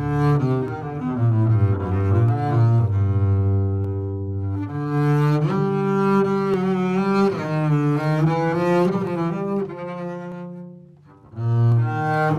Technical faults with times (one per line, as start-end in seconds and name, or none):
0.68 dropped samples
2.29 dropped samples
3.84 dropped samples
6.54 dropped samples
9.07 dropped samples
10.32 dropped samples
11.72 dropped samples